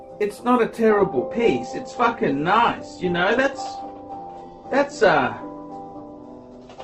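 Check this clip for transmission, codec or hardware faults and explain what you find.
One transmission fault is present. From 0.90 s to the end, the clip shows an adaptive stream at a lower bitrate. The connection slowed and the player switched versions abruptly, with no gap. Nothing remains above 8.1 kHz. The sound turns dull and smeared, which fits a drop from roughly 64 to 12 kbit/s Opus.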